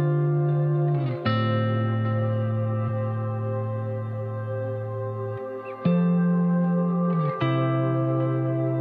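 At about 2.84 to 2.89 s the audio skips forward. That's compressed frames skipped: a short run of encoded frames never got played, either because they were missing from the file or because the decoder rejected them as corrupt. Around a fifth of a second of material just vanishes, which fits roughly four frames of about 46 ms each.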